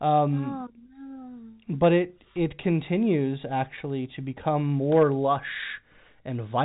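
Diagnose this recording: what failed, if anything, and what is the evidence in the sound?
Nothing failed: the speech carries the expected signature of G.711 mu-law telephone coding at 64 kbps, band-limited with nothing above 3.8 kHz, and no stage from wiring through network to playback adds anything beyond that.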